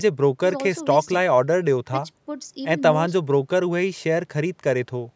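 Nothing stood out on listening to this speech, which carries the usual call microphone processing with nothing above about 8 kHz.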